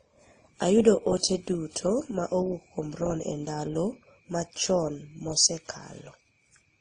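Throughout the speech, the sound carries layered compression artefacts, and nothing is heard above about 9.8 kHz. The likely cause is transcoding between lossy codecs. The audio seems to have passed through several encoders in turn. Each one spent its limited bits re-coding the artefacts left by the one before, then added its own. The texture fits a WMA stage, then AAC-LC, then low-rate Opus. Their artefacts stack together, and the lowest cut-off stays.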